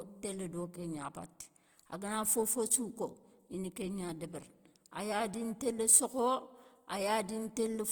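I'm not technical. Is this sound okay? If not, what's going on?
No. The speech was likely squeezed hard to save space, which is called Opus compression, and it runs through the whole clip. The encoder fills gaps with folded or noisy sound, so the speech comes across as rough, grainy and noisy throughout.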